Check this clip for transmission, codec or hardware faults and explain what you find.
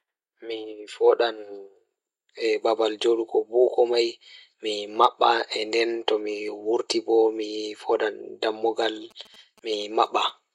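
There's one hardware-side fault, late in the clip. From 9.11 to 10.30 s you get GSM signalling bursts: a nearby 2G phone pinging the network, with the audio circuitry rectifying its radio bursts. It comes through as a galloping dit-dit-dit of short buzzes at 217 Hz, roughly 30 dB under the speech.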